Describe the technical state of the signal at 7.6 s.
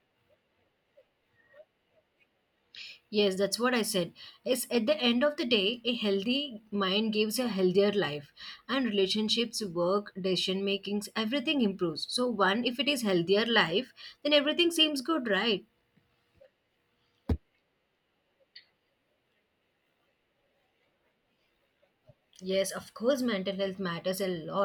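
At 7.6 s the speech signal is intact, with no audible technical fault at that point.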